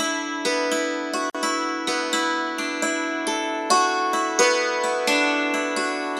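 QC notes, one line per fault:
1.30–1.35 s: gap at a join of encoded pieces. A 47 ms silence cuts into continuous sound, with smeared edges, then the sound resumes where it stopped. Encoder start delay and last-frame padding were left in at the join, which repeats every 6.0 s.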